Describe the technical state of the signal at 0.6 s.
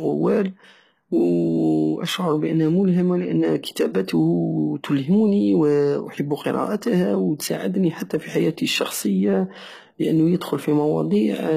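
At 0.6 s the speech carries plainly audible codec damage that runs through the whole clip, likely from HE-AAC compression at a rate that fits about 20 kbps in its v2 form. The treble is not the original but is rebuilt by copying lower bands upward under a coarse envelope, so harmonics fail to line up above the crossover. On a spectrogram the upper band shows repeated lower-band patterns, and nothing appears above 14.9 kHz.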